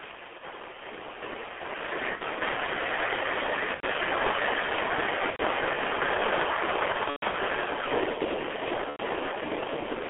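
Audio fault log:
throughout G.723.1 codec: heavy low-bitrate damage, sounding like a roughly 6 kbit/s coder with 30 ms frames. The band sits at about 300 Hz to 3.4 kHz, so speech is muffled and hoarse, and the slow-updating voice model smears consonants.
0.38–0.45 s, 2.15–2.22 s, 3.74–3.84 s, 5.30–5.41 s, 6.92–7.36 s, 8.90–9.00 s VoIP packet loss concealed by the speech codec: gaps of 30, 60, 90, 90 and 90 ms, plus a scattered 240 ms over 0.42 s around 7 s with a longest run of 120 ms. The decoder stretches its last pitch and filter into a fading buzzy tone or coloured noise, and the voice stays weak briefly after each gap.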